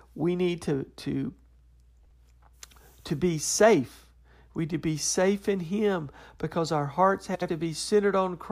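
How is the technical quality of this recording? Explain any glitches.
The speech recording has two brief frames-out-of-order glitches: at 2.01–2.11 s, and at 7.35–7.49 s just after "because our hearts". In each, adjacent runs of decoded audio play in swapped order, each run about 46 ms and 70 ms long respectively. The result is a short garbled flutter, and no time is lost.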